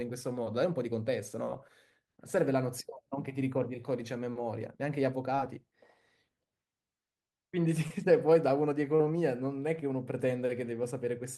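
Short concealed packet loss occurs at 5.35 to 5.40 s, 7.14 to 7.18 s, 7.88 to 7.92 s and 8.96 to 9.01 s. About 20 ms of the speech failed to arrive in time at each of the first three, and about 40 ms at the last. The decoder bridged each gap by extending the preceding sound and then cross-faded back into real audio. Each heals as a brief smear or wobble, the last slightly longer.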